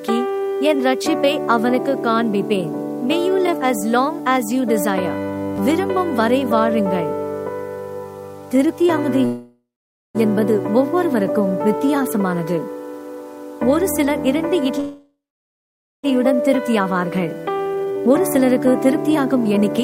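From start to finish there's a grainy, gritty edge that shifts with the sound itself. Quiet passages get rough, and the faintest bits break up or sputter. That's low bit depth without dither. It's likely an 8-bit signal that was truncated instead of dithered, so the rounding error tracks the audio rather than sitting underneath it as a smooth hiss. It lands somewhere around 35 dB below the signal.

At 9.25 s the audio stops moving forward and the last sound hangs on as a fading buzz or hiss until 10.17 s. About half a second of that is just silence. Then it picks up exactly where it left off. That's a call audio freeze, likely caused by packets stalling until the jitter buffer ran dry. The receiver covered about 0.89 s, nothing was actually lost, and that wait now sits as extra delay.

From 13.82 to 14.79 s things feel hurried with no pitch change. That's a jitter buffer speed-up running at about 115%. 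The receiver snips out tiny pitch-period slices over and over to shed backlog, roughly 150 ms of it here.

Straight after, from 14.80 to 16.06 s, there's a second, longer call audio freeze. The hanging sound fades to about 0.87 s of silence before resuming, and around 1.24 s gets filled in, again with nothing missing.

That backlog then gets worked off. From 16.19 to 16.81 s there's a milder speed-up at about 109%, trimming roughly 70 ms. From 17.48 to 19.80 s a stronger run at about 124% cuts around half a second and sounds noticeably rushed.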